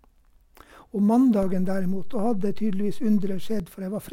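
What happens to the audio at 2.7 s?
A DC step spans 1.43 to 3.60 s: the waveform's zero line jumps by about -24 dBFS and holds, giving low thumps at each edge while the speech continues unchanged.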